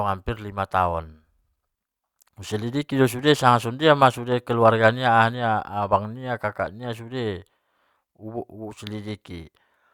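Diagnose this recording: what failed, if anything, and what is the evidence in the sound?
Nothing failed: the speech runs its whole length without any audible break, distortion or level fault at any stage of the chain.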